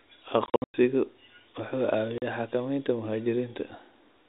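Packet loss filled with silence strikes from 0.46 to 0.74 s and again from 2.18 to 2.22 s. Lost packets were replaced by digital silence, so the speech drops out abruptly at hard edges. The first stretch loses about 220 ms in scattered holes across 280 ms, the longest gap being 100 ms. The second is a single 40 ms hole. These gap sizes point to 20 ms packets. Beneath the gaps, the narrow telephone band of G.711 coding is audible.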